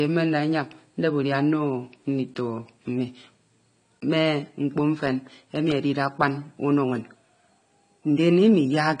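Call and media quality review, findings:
AAC compression, throughout. Dull, smeared speech; warbling on sustained vowels, fizzy sibilants. Likely AAC-LC encoder at a rate consistent with 32 kbps; quantiser starves bands, encoder lowpass applied. Spectrogram: hard ceiling at 10 kHz, patchy holes and noise-filled blocks below.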